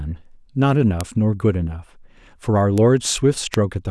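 A flipped bit in memory or on a digital link corrupts isolated samples in this speech clip, producing bit error spikes: sharp broadband ticks at 1.01 s (about -2 dBFS), 2.78 s (about -8 dBFS) and 3.54 s (about -2 dBFS, three samples).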